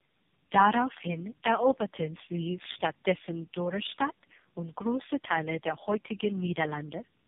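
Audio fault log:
throughout: tandem speech coding. The speech is rough, muffled and warbly, with nothing above 3.6 kHz. This points to three low-rate speech codecs in a row. Each one re-codes the previous codec's already damaged output, so the artefacts stack up.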